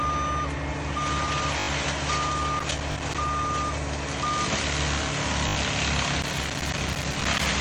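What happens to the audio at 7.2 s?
At 7.2 s the audio is inside a burst of loose connector crackle running from 6.22 to 7.46 s. A worn contact keeps making and breaking, chopping the signal into irregular scratchy crackle; the waveform shows jagged dropouts and spikes, the spectrogram scattered broadband vertical streaks.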